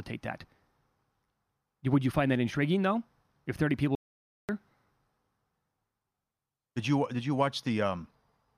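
An audio dropout to silence runs from 3.95 to 4.49 s, about 0.54 s of silence. The input was likely lost while recording continued, so the speech cuts off abruptly and the room tone vanishes entirely.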